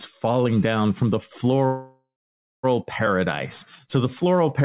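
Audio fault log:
1.66–2.65 s, call audio freeze: the sound stalls into a fading buzz or hiss, then about 0.56 s of silence, before resuming exactly where it stopped. Packets were likely held up and the jitter buffer ran dry. Unlike a dropout, nothing is lost; everything afterwards arrives about 0.97 s late, still band-limited below 4 kHz.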